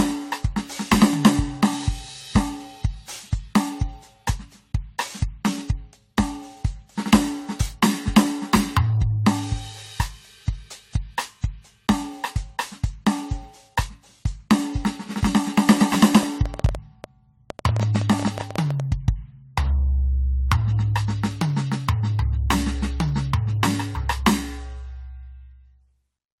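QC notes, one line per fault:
Throughout: generation loss. The music sounds swirly, hollow and smeared, with softened attacks, likely from about seven rounds of lossy re-encoding, which fits a 64 kbit/s AAC-LC chain. On a spectrogram, holes and speckled, flickering bands appear, with no content above 20.1 kHz.
15.81–18.81 s: train of clicks. About thirty similar clicks at an uneven 9.7 per second tick over the music, peaking around 10 dB above it, likely from nearby interference or a faulty connection. They show as thin vertical spikes in the waveform and full-height streaks on a spectrogram.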